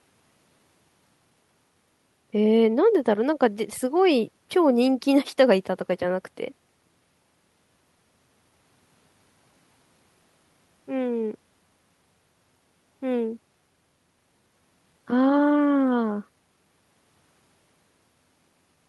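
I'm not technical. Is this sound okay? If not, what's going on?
Yes, this recording sounds fine; nothing's going wrong here.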